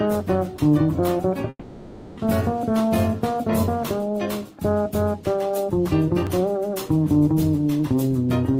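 From 1.49 to 2.19 s the sound smears into a fading buzz and then a brief silence before returning, likely a long network dropout that concealed about 0.7 s of missing audio. At 6.27 s a small skip ahead in the sound points to a dropped buffer (overrun), with roughly a millisecond or two lost.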